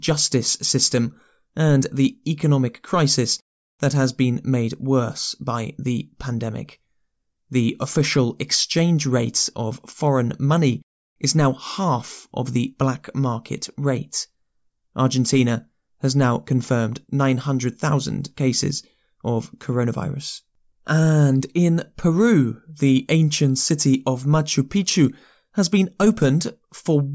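Nothing stood out as a technical problem on listening to this speech recording.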